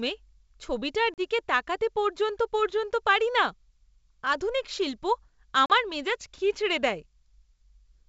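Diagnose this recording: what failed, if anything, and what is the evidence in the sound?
The network stage failed: packet loss on an ADPCM call, at 1.14 to 1.21 s and 5.66 to 5.72 s. Each hole is about 40 ms, which fits roughly two lost packets, filled with silence. The waveform drops to a flat line with hard edges, and the spectrogram shows a blank vertical stripe at all frequencies. The decoder's predictor and step size then disagree with the sender's, so speech resumes slightly distorted before settling.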